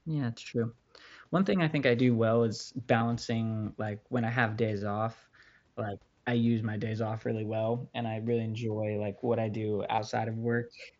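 At 2.99 s and 9.96 to 9.98 s, concealed Bluetooth headset packet loss fills brief gaps with repeated waveform: a short buzzy patch, periodic blocks on the waveform and flat striped harmonics on a spectrogram.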